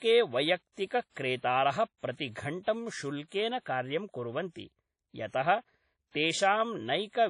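WMA compression runs through the whole speech clip. Nothing is present above 10.1 kHz, and the quantisation noise is plainly audible: a ringing, washy quality with a hiss that swells and fades with the speech. The likely cause is a Windows Media Audio transform encoder working with long blocks, where coarse quantisation smears noise across tens of milliseconds and zeroes weak spectral lines. The damage fits a low bitrate of around 32 kbps.

Pre-echo appears at 0.86 s, 1.98 s and 3.60 s, the last just before "कार्यं कुर्वन्ति". Each time a short hiss rises in the quiet moment before a sharp onset, spreading back 46 ms, 56 ms and 58 ms respectively, and the onset itself sounds softened and smeared. The attack falls late in a transform block, and the noise allotted for the loud part is spread evenly over the whole block, including the silence ahead of it.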